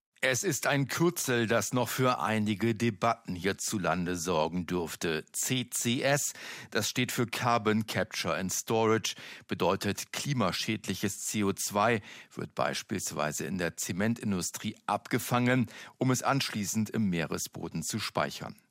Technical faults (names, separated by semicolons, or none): none